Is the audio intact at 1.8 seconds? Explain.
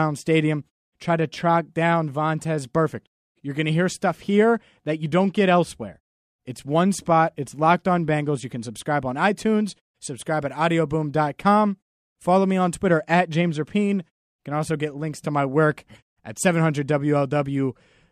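Yes, the speech is intact at 1.8 seconds, with no fault to be heard at that moment.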